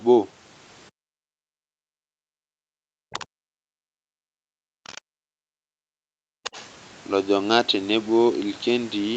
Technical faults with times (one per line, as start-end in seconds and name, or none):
0.96-6.24 speech suppressed in double talk
3.12-3.25 other side's voice leaking through
4.87-5.00 other side's voice leaking through
6.44-6.67 other side's voice leaking through